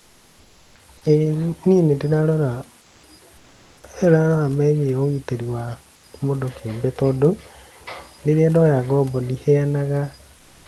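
Comfort noise replaces the room background at 0.0–0.75 s, 2.81–3.03 s, 3.37–3.83 s, 5.95–6.03 s and 10.37–10.65 s. It is a steady, detail-free hiss, about 3 dB quieter to 1 dB louder, likely from Opus discontinuous transmission. Unlike a dropout, these pauses never fall silent.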